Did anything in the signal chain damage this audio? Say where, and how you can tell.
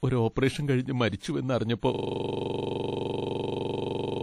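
Yes. At the codec stage, likely a low-bitrate WMA encode: plainly audible washy, ringing compression throughout, nothing above 14.8 kHz, which fits roughly 48 kbps.

Pre-echo, also from the codec: hiss smears ahead of attacks at 1.16–1.21 s, right after "ഒരു ഓപ്പറേഷൻ കഴിഞ്ഞ്", and at 1.79–1.83 s. Block noise leaks about 46 and 37 ms early.

A system hang loop at the driver or buffer stage runs from 1.95 s to the end. The system froze and one 42.67 ms chunk repeats at 23.4 Hz, which fits a 2048-sample buffer.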